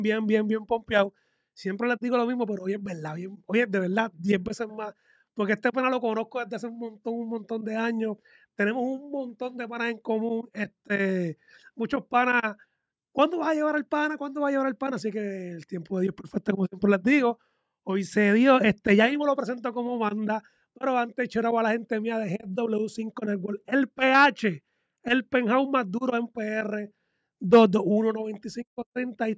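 No technical faults detected.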